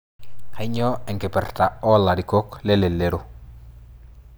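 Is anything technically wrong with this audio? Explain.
No, nothing is technically wrong with this speech recording. No technical fault can be heard anywhere in it.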